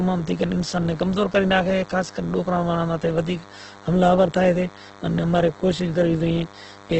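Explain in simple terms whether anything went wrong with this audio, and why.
A thin, steady buzz runs under the speech from start to finish, quieter than the voice but never letting up. It is DECT cordless phone buzz: a cordless phone or its base station nearby sends a short radio pulse 100 times a second, and the recording equipment picks these up and turns them into sound. The result is a 100 Hz hum with a harsh, buzzy edge from the many overtones stacked on top of it.

The voice itself also sounds rough and grainy throughout, as if it were scratched or slightly noisy. Everything above about 8.2 kHz is missing, so the sound lacks crispness and air. The likely cause is heavy Opus compression, a way of shrinking audio files. When the file is squeezed hard, the encoder can't keep every detail, so it patches the gaps with borrowed or noise-like sound, which gives speech this gritty texture.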